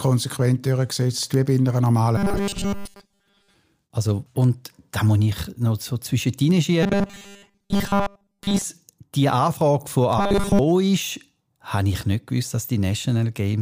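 From 0.31 s to 13.23 s, word clock ticks recur roughly every half second, around thirty in all. The receiver's clock drifts by roughly 40 ppm against the sender's, slipping one sample per event. Each tick shows as a thin vertical line across the spectrogram and a single-sample glitch in the waveform.

From 2.17 to 3.56 s, 6.83 to 8.64 s and 10.18 to 10.59 s, the speech turns into a rigid, metallic 200 Hz buzz. The likely cause is robotic sound from repeated short buffers, with a segment of about 5 ms replayed over most of the audio. This shows as evenly spaced horizontal harmonics at multiples of 200 Hz and identical repeating cycles in the waveform.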